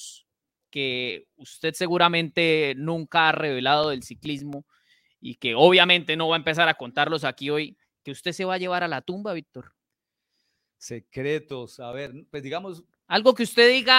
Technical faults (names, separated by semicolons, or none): CD scratch ticks